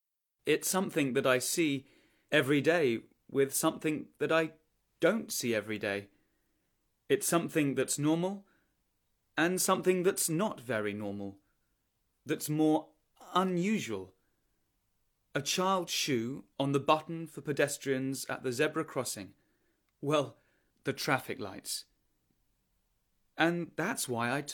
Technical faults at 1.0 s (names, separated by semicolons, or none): none